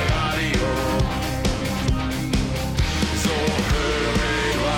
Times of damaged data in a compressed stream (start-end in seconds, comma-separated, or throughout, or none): 1.60, 4.51